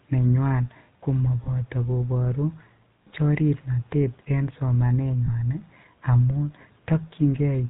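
Speech coded with the GSM full-rate codec throughout has a buzzy, gravelly roughness and nothing above 4 kHz, consistent with about 13 kbps. Plain telephone band-limiting would not add the grain. Lost GSM frames at 1.44–1.48 s and 5.26–5.29 s replace the sound with a brief metallic ring, about 20 ms each, rather than the silent gap a plain dropout would leave.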